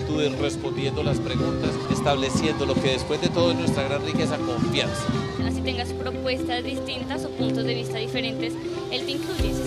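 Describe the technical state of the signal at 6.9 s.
The signal at 6.9 s is intact, with no dropout, distortion or other audible fault at that moment.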